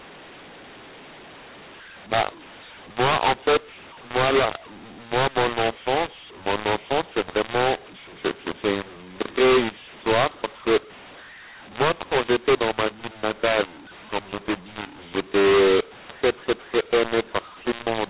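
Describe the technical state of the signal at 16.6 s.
At 16.6 s the speech carries a mu-law and A-law mix-up that runs through the whole clip. Samples coded with A-law are decoded with the mu-law curve, so levels are remapped unevenly. The speech sounds harsh and distorted, and the quietest passages sit on a raised noise floor, within the 4 kHz band of the 8 kHz telephone coding.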